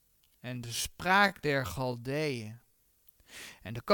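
From the start of the clip to about 2.8 s the speech runs at roughly 0.61 times its natural pace, then snaps back to normal speed with no change in pitch. This is a time-stretched section. Its likely cause is software lengthening the passage to fill a target duration while holding pitch by repeating short slices of the waveform. The slowed stretch drags.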